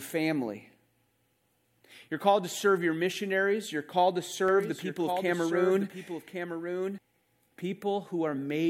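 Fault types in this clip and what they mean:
Doubled audio track: after "called to", a quieter copy trails about a second behind, then cuts off abruptly. Likely a second, slower capture path.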